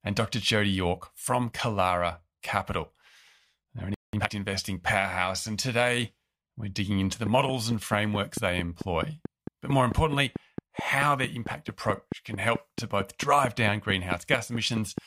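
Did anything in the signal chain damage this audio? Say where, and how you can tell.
Yes. At the playback stage the player likely ran dry of buffered data or had its output thread blocked, causing a playback stall. The speech cuts to silence mid-flow from 3.94 s to 4.13 s, a gap of about 0.19 s, before resuming.

Straight after, from 4.13 s to 4.31 s, the player works off its backlog with time-compressed catch-up, splicing out short segments and cross-fading the remainder. The speech runs at double speed without a pitch shift, sounding hurried just before "investing powerhouse".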